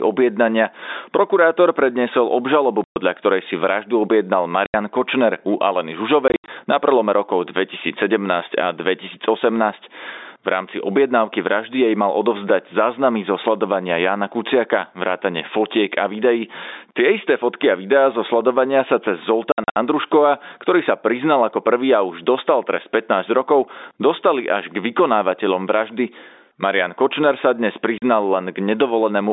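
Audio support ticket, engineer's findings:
Gain pumping throughout: loud and soft parts pulled closer in level, sound squashed, level swing around 15 dB. Likely a fast limiter or compressor reacting to excessive mic gain.

Packet loss filled with silence: hard-edged gaps at 2.84–2.96 s, 4.66–4.74 s, 6.28–6.48 s (broken up), 19.52–19.76 s (broken up), 27.98–28.02 s. Gap lengths in 20 ms steps, which fits 20 ms packets. Receiver inserts silence, no concealment.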